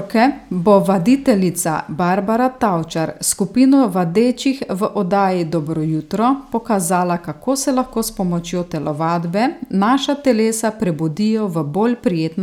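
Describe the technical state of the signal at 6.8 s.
At 6.8 s the speech signal is intact, with no dropout, distortion or other fault present at that moment.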